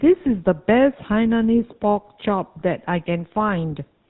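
A speech recording with a buzzy, gravelly roughness throughout, plainly audible, and nothing above 4 kHz, so it sounds dull and boxed-in. The grain is the GSM full-rate codec, which fits the 13 kbps full-rate coder. It models the vocal tract as a filter and drives it with a sparse, regularly spaced pulse excitation that keeps only one sample in three, so fine detail in the voice is replaced by a coarse, rasping texture. From 2.60 to 2.62 s there is a brief rough, metallic ring where the sound is held rather than continuing naturally. These are lost GSM frames, a gap that fits a single missing 20 ms frame. The decoder covered it by repeating the last good frame's settings, which freezes the spectrum for that instant and gives the hollow, ringing hold before normal decoding resumes.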